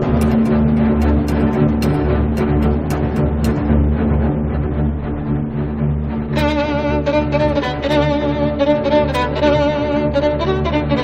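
Nothing is technically wrong with this audio clip.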